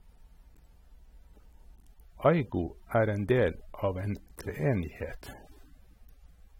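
From the first moment to the last, the speech carries what sounds like AAC compression damage, likely from an AAC-LC encoder working at a low bitrate, around 32 kbps. Nothing comes through above about 16.6 kHz, and the encoder has clearly been starving the spectrum, quantising it coarsely and dropping detail it judged inaudible. You can plainly hear it: the speech comes across dull and smeared, with a fizzy, watery edge.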